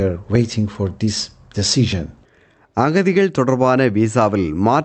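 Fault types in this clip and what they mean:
No faults are present.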